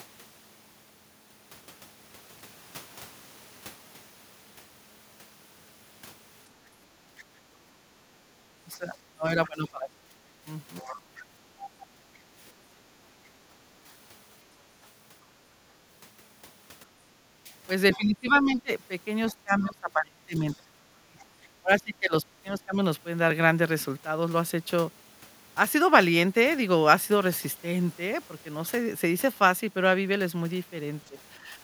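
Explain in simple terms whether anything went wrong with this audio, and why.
Several things went wrong, all tied to the echo canceller struggling with sound from the loudspeaker.

First, speech suppressed in double talk: from 6.66 to 12.02 s and again from 17.45 to 22.79 s, the talker's voice keeps dipping and breaking up, with brief dips at 13.50 to 13.55 s and 31.08 to 31.47 s. The likely cause is the canceller mistaking the talker for echo and turning everything down.

Second, background gated by the echo canceller: the room sound briefly sinks from 7.42 to 8.35 s, then again near 11.4 to 12.34 s, as the canceller clamps down on the microphone while the loudspeaker plays and then releases it.

Third, the other side's voice leaking through: a faint second voice sneaks in from 10.81 to 11.86 s and 17.92 to 19.66 s, quieter than the main talker. That's likely loudspeaker sound the canceller didn't fully remove.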